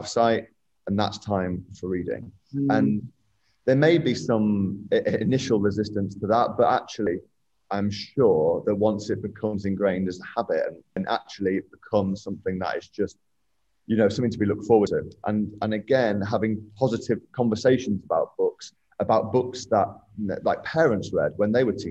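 The audio skips at 3.17, 7.07, 10.97, 14.87 and 18.77 s. Each jump drops about a tenth of a second. This is likely audio missing between 4-second chunks.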